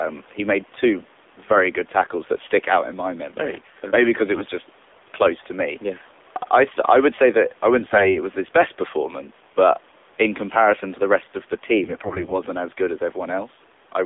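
AMR narrowband mobile codec damage runs through the whole of this speech recording. The voice has a buzzy, synthetic edge, and the band is held to roughly 300 Hz to 3.6 kHz. Nothing reaches the upper range a wider-band path would carry. The codec rebuilds the voice from a vocal-tract model driven by a few pulses per 5 ms subframe, and the coarseness heard here fits a low mode of around 7.4 kbps. AMR bit errors break in at 0.62 to 0.78 s, 7.80 to 8.18 s and 11.84 to 12.36 s, with the last burst the longest. In each stretch the voice keeps its pitch and level but turns hoarse, scratchy and gargly. A weak link flipped a few percent of the less protected bits while the checksum on the critical bits still passed. Mis-placed excitation pulses and slightly wrong gain, pitch and spectral values then decoded as rough, damaged frames rather than dropouts.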